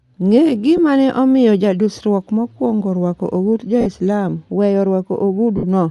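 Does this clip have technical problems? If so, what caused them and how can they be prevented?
Yes. Bluetooth LC3 compression runs through the whole speech clip, and the plainly audible coding damage is likely from this codec. LC3 works in 10 ms transform frames and, to save bits, zeroes much of the upper spectrum and fills those bands with shaped noise. This gives the speech a breathy, grainy edge on sibilants and upper harmonics, a texture that fits a link running around 48 kbps. Raising the LE Audio bitrate or codec configuration, or keeping the source and receiver close with less radio interference so the link can hold a higher rate, prevents this.

Lost LE Audio frames cause dropouts at 0.77–0.79 s, 3.81–3.87 s and 5.57–5.64 s. When a frame never arrives, the LC3 decoder conceals the gap by reusing the last good spectrum with randomised signs. The longer gaps fade as concealment runs on. 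The first gap fits a single lost 10 ms frame, and the later two fit about 50 ms and 60 ms of consecutive losses. Reducing radio congestion and distance, or using retransmission settings with more margin, prevents these losses.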